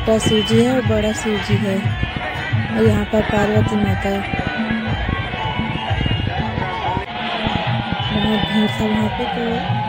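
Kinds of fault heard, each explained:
Train of clicks: a run of similar short pulses ticks over the sound from 2.03 s to 8.96 s, about forty in all at roughly six per second but unevenly spaced, peaking around 10 dB above the sound itself and audible in quiet gaps too. Likely interference or a faulty connection or power supply. On a waveform they show as narrow spikes standing above the signal; on a spectrogram, as thin vertical lines spanning the full frequency range at irregular intervals.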